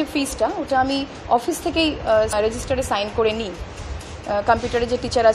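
Throughout, the audio has a watery, swirling quality with smeared attacks, which is most likely MP3 compression at a low rate, one that fits roughly 64 kbps. On a spectrogram the treble stops at a flat ceiling, and isolated bins flicker on and off between frames.

From 2.29 to 2.33 s there is a brief glitch, caused by damaged data in a compressed stream. The decoder misread the broken frames, lost sync and jumped to the next header. The waveform shows a short discontinuity there, and the spectrogram shows a thin broadband smear.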